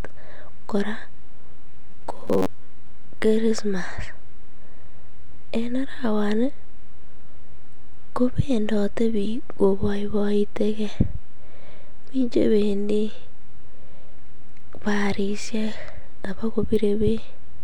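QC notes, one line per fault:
1.91–2.67 s, robotic sound from repeated short buffers: the speech turns into a stiff, metallic buzz pinned at about 94 Hz for that stretch, still loosely tracking the words. Likely cause is audio arriving too slowly, so playback keeps looping a tiny chunk of roughly 10.7 ms, which sets that buzz frequency, while about half the real signal gets skipped.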